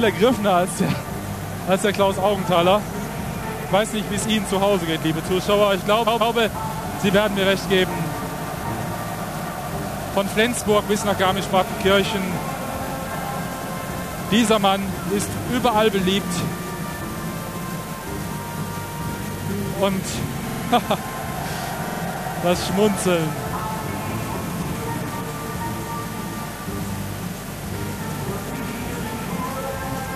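A stutter at 6.06 s replays a chunk of about 139 ms twice more, running to 6.34 s. Shorter stutters follow at 20.48 to 20.62 s and 21.88 to 22.01 s, where a 46 ms chunk repeats three extra times. These are repeated frames: compressed blocks were written or sent more than once, so the decoder replays them. The block sizes fit runs of six and two frames, and the clip grows by about 0.56 s overall.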